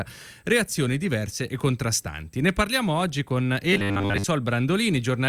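Robotic sound from repeated short buffers runs from 3.73 to 4.24 s: the speech hardens into a rigid, metallic 100 Hz buzz. The likely cause is playback starving and looping a roughly 10 ms slice for most of that stretch, skipping real audio.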